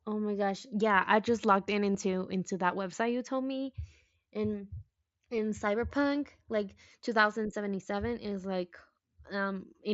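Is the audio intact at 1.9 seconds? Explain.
No. At 1.94 s, between "I just logged in" and "into that website you", there is concealed Bluetooth headset packet loss. About 15 ms of audio was lost between headset and phone, which fits two dropped packets. The receiver filled the gap by repeating the closest-matching piece of the waveform it had just received. Because the gap is so short, the patch is brief, heard as a buzzy flicker at full level with a slight warble as the real audio resumes.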